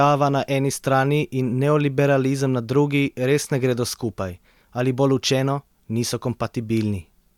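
Nothing stood out on listening to the speech in this recording.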